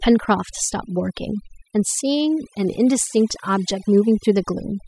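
From start to finish the speech carries overdone noise removal. The denoiser has pulled down every frequency band that sits close to its picture of the background noise, so the gaps between phrases fall to near silence flecked with brief twinkling specks, and quieter parts of the voice are stripped away with the noise. A noise gate would instead shut the whole signal at once; here individual bands flicker independently.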